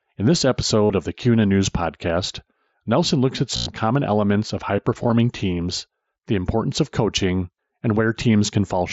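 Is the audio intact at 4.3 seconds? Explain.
Yes, at 4.3 seconds the speech carries on without a fault, passing through what sounds like a wideband Bluetooth headset link using the mSBC codec.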